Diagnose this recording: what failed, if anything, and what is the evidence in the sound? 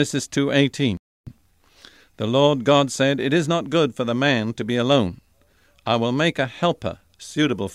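The speech drops out at 0.97 s and resumes at 1.29 s, with 295 ms of near-silence between. This is likely a Bluetooth stall in the wireless playback stage: held-up packets emptied the headphone buffer. The waveform shows an abrupt flat gap, and the spectrogram a clean vertical blank band.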